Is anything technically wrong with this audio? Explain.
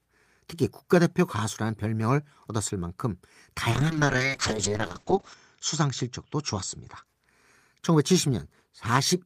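Yes. From 3.73 s to 7.11 s there is a call bitrate drop. The encoder's bit budget fell sharply, which fits a drop from around 40 kbps to about 7 kbps, and stayed at its lowest for about 1.61 s. With so few bits the codec quantises the speech coarsely and narrows the coded band from 20 kHz to 8 kHz. The speech turns muffled and rough, with a watery texture, until the rate recovers.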